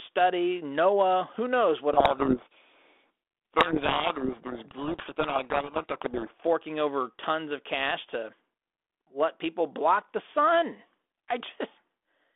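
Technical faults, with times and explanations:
1.93–6.43 s, codec payload misread: the G.726 code words arrive with their bit order reversed, so the decoder rebuilds wrong sample differences and buries the speech in harsh distortion.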